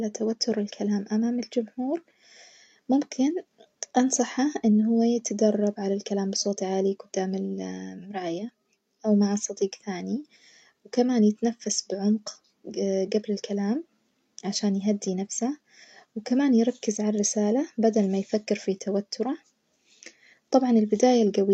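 No technical faults can be heard anywhere in this speech recording. Nothing in the audio breaks, stalls or distorts at any point.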